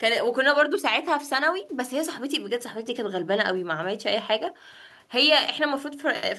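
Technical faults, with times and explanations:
No technical faults are audible anywhere in the recording.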